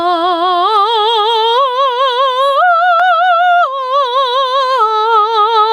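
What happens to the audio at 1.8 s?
Gain pumping at 1.8 s, as throughout the music: a fast limiter likely clamps overdriven gain, so the gain swings by around 20 dB and loud and soft parts are squashed closer in level.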